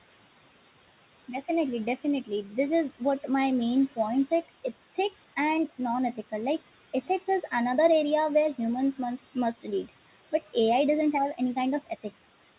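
Speech over room noise sitting about 16 dB below it, and there are noise suppressor artifacts throughout: the suppressor pulls the steady background down by about 18 dB frame by frame, so the noise dips between phrases and swells back under the talking. Near the end, from 11.86 to 12.21 s, there's speech cut by the noise suppressor: it mistook some quiet speech for background and ducked it with the noise, by up to about 17 dB, so about a tenth of a second of speech across that stretch comes out swallowed and faint. The band stops at 4 kHz, which fits a G.711 A-law call path at 64 kbps.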